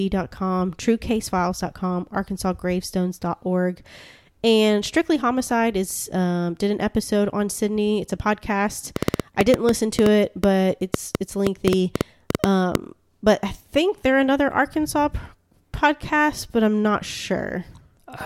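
It's a speech recording with a train of clicks running from 8.96 to 12.76 s: around twenty sharp, similar-shaped ticks at roughly 5.5 per second, spaced unevenly rather than like a steady metronome. They poke out something like 20 dB above the speech and carry on through the pauses too, so they're riding on top of the signal rather than coming from it, likely interference from nearby gear or a faulty connection or power supply.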